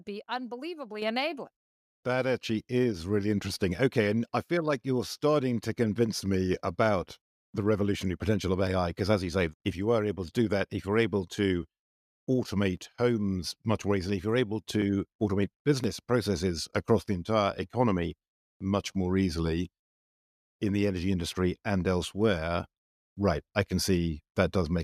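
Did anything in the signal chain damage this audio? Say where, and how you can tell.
Yes. The first fault is in call processing: a microphone volume step-up. At 1.02 s the level jumps by about 6 dB, and at 2.04 s, right after "unbelievably enabling", it rises by about 4 dB more. Voice and background noise both jump at once, which points to software raising the input gain rather than a change at the source.

The second fault is at the driver or buffer stage: periodic USB or driver dropouts. From 8.67 s, just after "the revolutionary potential of", to 15.84 s, just before "processes across the entire", there are roughly seven small ticks spaced 1.02 s apart. Each is a skip of around a millisecond with no fill. This fits a recurring bus or driver stall that discards samples.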